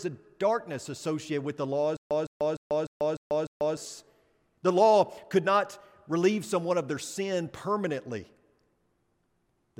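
Right after "associated with the law", from 1.97 to 3.77 s, the speech breaks into a stutter with silent gaps. A burst of about 160 ms plays again and again, six times. Each repeat is followed by roughly 140 ms of dead digital silence, so the pattern cycles every 300 ms. It sounds like a stuck loop. The likely cause is a stalled player or stream replaying its last fragment at each retry. The speech meant for those seconds is lost.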